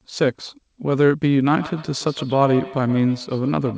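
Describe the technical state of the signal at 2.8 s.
Feedback echo between two devices: a second device replays this audio into the microphone, so from 1.53 s to the end the speech returns roughly every 150 ms, ringing, at up to about -14 dB.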